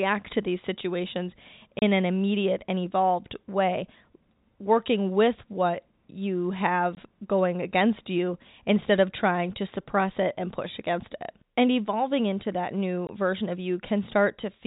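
Packet loss filled with silence cuts three holes in the speech, at 1.79 s (30 ms, after "to these situations"), 6.95 s and 13.07 s (20 ms each). The lengths fit 10 ms packets. Each hole is a flat, silent stretch in the waveform and a blank vertical stripe on the spectrogram, with hard edges.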